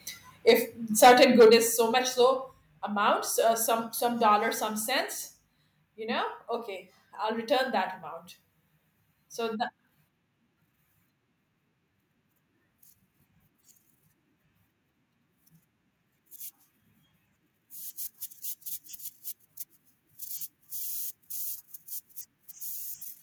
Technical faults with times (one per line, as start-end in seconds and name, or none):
0.48-0.54 microphone overload
0.50 microphone volume stepped down
1.02-1.55 microphone overload
1.50 microphone volume stepped down
2.52 microphone volume stepped down